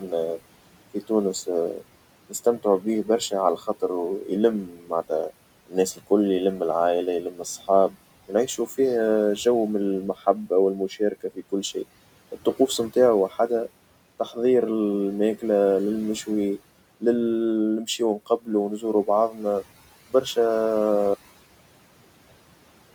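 A speech recording with room noise sitting about 19 dB below the voice. Noise suppressor artifacts run throughout: the suppressor pulls the background down by about 18 dB between phrases, so it pumps in and out. Speech cut by the noise suppressor occurs from 0.94 to 6.61 s (about a second in total, up to about 18 dB down), 7.22 to 8.69 s (up to about 13 dB), 10.14 to 11.76 s (about 18 dB), 12.32 to 13.37 s (about 12 dB) and 17.85 to 20.37 s (under a second, about 19 dB). In each span, part of the speech is mistaken for noise and swallowed. A cut-off end at 21.14 s stops the audio mid-sound and drops it into digital silence with no decay, because the final buffers were never written out.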